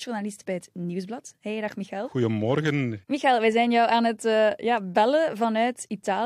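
No technical faults occur in this speech recording, so there are none to describe in time order.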